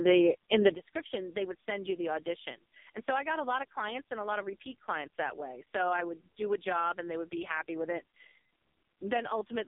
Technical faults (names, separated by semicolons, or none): AMR narrowband mobile codec; sudden gain jump